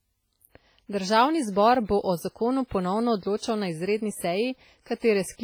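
Throughout, a ringing, washy hiss rises and falls with the speech, likely WMA compression, fitting a low bitrate near 24 kbps. Unlike steady background noise, it follows the signal. At 1.85 s before "bo o zakonu ponovno", at 2.67 s after "zbor bo o zakonu", and at 3.37 s before "na izredni", pre-echo puts roughly 40 to 50 ms of hiss ahead of an attack and softens it. This is block noise leaking backward, so unlike a click it comes before the onset.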